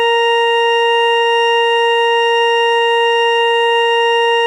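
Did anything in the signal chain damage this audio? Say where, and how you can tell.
No, nothing in the signal chain can be heard damaging this music. There is no point in the recording where any stage can be heard altering the sound.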